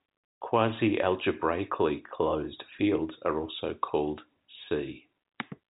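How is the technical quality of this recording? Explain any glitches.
No audible glitches or faults.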